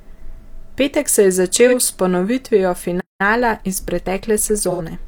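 At 1.67 s, right after "se je", there is a brief AAC frame loss with concealment. For about 43 ms, a duration that fits one lost frame, the decoder had nothing to play and rebuilt the gap from the last good spectrum. That produces a short smeared, noisy and phasey patch. On a spectrogram the harmonic lines blur into a diffuse block up to 1.74 s, and the waveform envelope there looks flattened and grainy instead of cleanly periodic.

From 3.00 s to 3.21 s the sound cuts out mid-flow for about 190 ms and then resumes. This is a playback stall, most likely the player running out of buffered data or having its output thread blocked. The waveform drops to a flat line and the spectrogram shows a clean vertical band of silence with abrupt edges on both sides.

After the stall the player makes up the lost time with time-compressed catch-up. From 3.21 s to 4.93 s the audio runs at 1.1 times normal speed while keeping its pitch. 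Small pieces are cut out and cross-faded, which makes the speech sound hurried. The spectrogram shows syllables packed closer together with no shift in pitch, and the splice points leave slight periodic discontinuities in the waveform.

Inside that stretch, at 4.70 s, a second AAC frame loss with concealment lasts about 85 ms, consistent with two consecutive frames missing. Because the gap is longer, the concealed patch lasts longer before real audio returns at 4.81 s. On the spectrogram this shows as a blurred patch.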